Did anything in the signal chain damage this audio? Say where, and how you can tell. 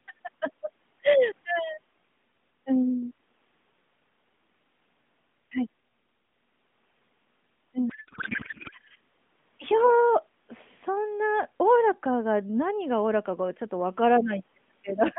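Yes. At the codec stage, a codec payload misread from 7.90 to 8.74 s replaces the speech with garbled noise and warble that barely tracks it. That points to an AMR packing mismatch, likely octet-aligned frames decoded as bandwidth-efficient, so every field lands misplaced.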